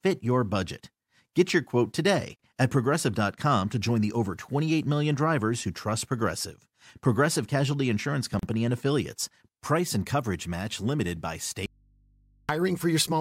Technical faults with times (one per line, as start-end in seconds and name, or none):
2.36-2.39 gap at a join of encoded pieces
8.39-8.43 gap at a join of encoded pieces
11.66-12.49 audio dropout to a faint residue